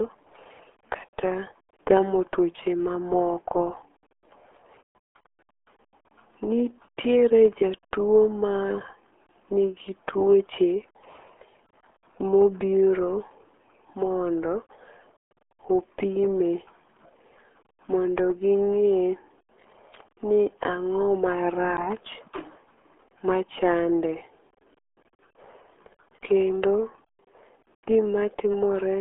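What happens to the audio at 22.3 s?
At 22.3 s the speech is muffled and gargly, with a thin, boxy tone and nothing above about 3.6 kHz. That isn't a moment-specific event. It's the RealAudio 14.4 codec damage that runs through the whole clip. The heavy coding artefacts and the band limited to roughly 300 Hz to 3.4 kHz point to RealAudio 1 at around 8 kbit/s. That rate forces the encoder to discard high frequencies and crudely model what remains.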